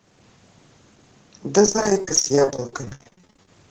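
Repeated packet loss (robotic sound) from 1.59 to 3.48 s: lost packets, gaps up to 50 ms, are patched with extended audio, leaving the speech choppy.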